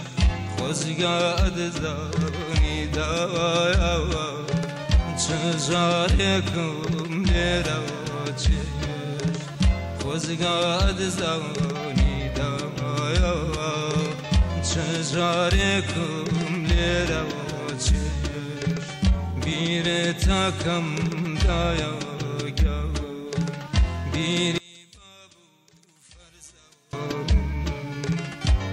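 From 24.58 to 26.93 s the sound falls about 28 dB, likely one channel inverted cancelling shared content; the waveform shrinks and the spectrogram dims across all frequencies.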